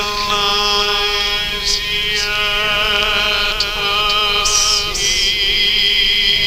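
From start to finish the audio carries a doubled audio track: a second full-band copy trails the original by about half a second, roughly 5 dB quieter, with no decay or room colouring, so each event returns as a clean, slightly weaker repeat. The likely cause is the signal being picked up twice, once through a slower path. A waveform shows every transient echoed a half-second later at lower amplitude; a spectrogram shows each feature duplicated intact, shifted right.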